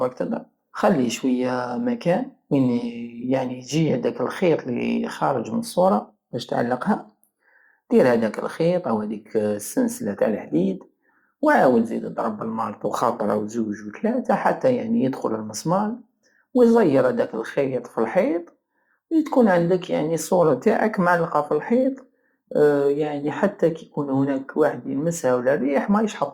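No technical faults are audible.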